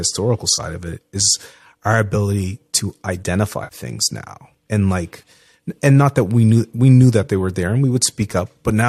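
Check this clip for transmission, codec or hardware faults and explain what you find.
Three short AAC frame losses with concealment are audible in this speech clip; the codec path itself adds only light coloration, likely from low-delay AAC.

The first loss is at 0.55–0.60 s, just before "of it is our". About 30 ms of audio is missing. The second is at 3.64–3.75 s, ahead of "now and like and", with about 70 ms missing. The third is at 5.22 s, between "now and like" and "and not that we", and covers about 10 ms.

Those lengths fit whole frames of roughly 10 ms each going missing. The decoder covers each gap by re-using the last good spectrum with altered phase and energy. The result is a brief smeared, phasey patch rather than a clean hole. That rules out a plain dropout: there is no hard cut to silence, only a blurred stretch.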